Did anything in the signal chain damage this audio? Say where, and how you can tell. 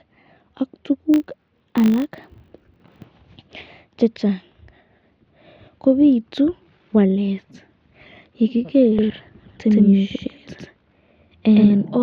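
Yes, two spots. From 1.14 to 3.08 s there's a buzz at 50 Hz riding on the speech, rising and falling with its level. That's a filter restarted on every block, somewhere in the processing stage. The filter drops its memory at each block boundary and starts from silence, so every block opens with a little transient. A 50 Hz tick rate fits blocks of about 20 ms.

Then from 8.99 s to the end there's a doubled audio track. A second, full-band copy of the speech trails the original by around a tenth of a second, at about the same loudness. It has no reverb tail or room colour, and it switches on abruptly at 8.99 s, so it isn't an acoustic echo. The likely cause is the same signal being picked up again through a slower capture path or an edit that left two out-of-step copies stacked.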